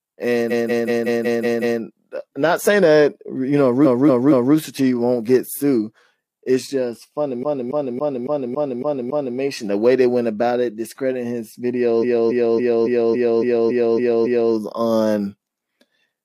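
A stuttering loop interrupts the speech four times: from 0.47 to 1.77 s a 186 ms fragment plays seven extra times, from 3.81 to 4.51 s a 232 ms fragment three extra times, from 7.39 to 9.34 s a 279 ms fragment seven extra times, and from 11.99 to 14.49 s a 279 ms fragment nine extra times. These are repeated frames: a short run of compressed frames was written or sent again, so the decoder replays it, stretching the audio by roughly 1.3, 0.7, 2.0 and 2.5 s.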